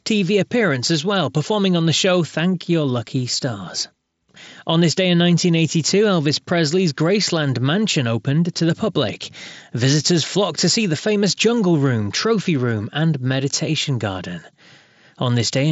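No technical faults occur at any point in the speech, so there is nothing to describe in time order.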